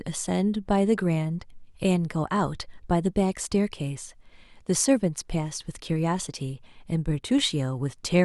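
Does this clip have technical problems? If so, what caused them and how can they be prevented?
No, no technical faults here.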